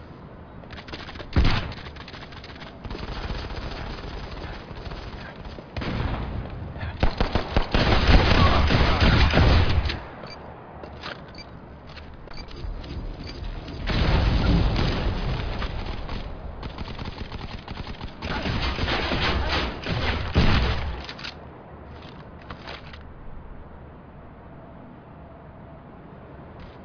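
No technical faults can be heard anywhere in the audio.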